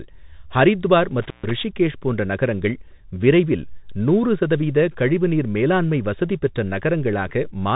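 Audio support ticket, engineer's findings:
Bluetooth CVSD headset codec, whole clip: speech band-limited, nothing above 3.8 kHz; sibilants scratchy, granular hiss underneath, consistent with a 64 kbps one-bit link. Spectrogram: hard ceiling, speckled noise floor.

Intermittent contact, 1.22–1.51 s, just before "ரிஷிகேஷ் போன்ற நகரங்கள் விரைவில்": connection opens about 135 ms, signal drops to faint hiss with crackle at both edges. Waveform: near-flat gap bracketed by spikes.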